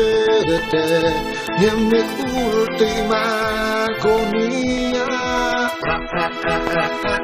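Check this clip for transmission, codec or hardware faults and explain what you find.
There's one fault, a single loud pop near the end, from about 6.67 to 6.69 s. It's a short, sharp click that jumps well above the surrounding level, roughly 15 dB louder, while the sound keeps going underneath without a break. That's the classic signature of a voltage spike getting into the chain, likely from a switch, a connector being touched, static, or a driver hiccup. The circuitry downstream smooths it into that brief thump.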